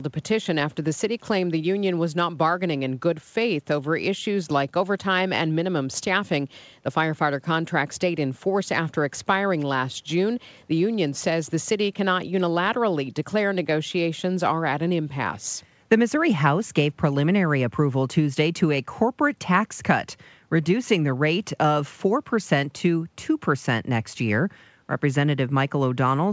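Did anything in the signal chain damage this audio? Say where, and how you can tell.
No, nothing in the signal chain damaged this audio; it went through a call codec that leaves nothing above 8 kHz, as expected for that path.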